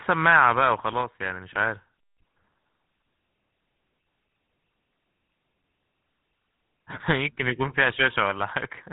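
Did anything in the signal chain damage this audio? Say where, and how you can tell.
Yes. The damage happens at the codec stage and runs through the whole clip: the speech has the GSM full-rate codec's buzzy, gravelly roughness, and it is plainly audible. The codec models the vocal tract and feeds it a coarse, regularly spaced pulse excitation, which fits the 13 kbps full-rate mode, so fine detail becomes a grainy buzz. On a spectrogram, energy stops sharply at 3.9 kHz, with smeared, striated harmonics beneath.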